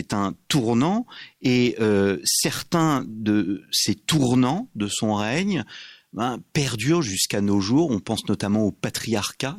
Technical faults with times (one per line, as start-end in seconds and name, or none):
none